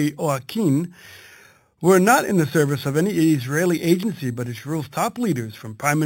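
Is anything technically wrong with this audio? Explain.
Yes. Throughout the speech there is imaging from sample-and-hold upsampling. The rate was raised by simply repeating each sample, with no smoothing filter to remove the stepped edges. The result fits conversion from an 8 kHz source up to 44.1 kHz. Those steps fold mirrored copies of the spectrum above the original band. The first copy sits between 4 kHz and 8 kHz at about 17 dB below the signal. It is heard as a bright, metallic fizz that rises and falls with the speech.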